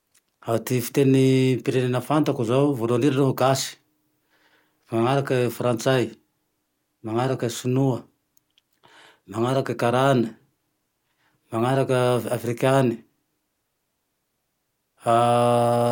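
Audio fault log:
No faults heard anywhere in this speech recording.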